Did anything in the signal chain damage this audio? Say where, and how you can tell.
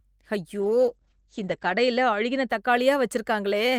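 Yes, a call bitrate drop in the codec. From 0.6 to 2.55 s the speech goes rough and muffled, losing everything above 8 kHz, which fits an encoder squeezed down to about 10 kbps.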